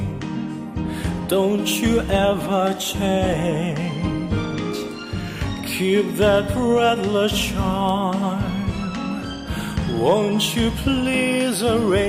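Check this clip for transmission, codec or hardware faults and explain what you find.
Two bit error spikes are present, at 4.91 s and 7.89 s. A flipped bit in memory or on a digital link throws one sample, then two adjacent samples, to about -18 dBFS before snapping back. Each gives a single sharp, broadband tick unrelated to the surrounding sound.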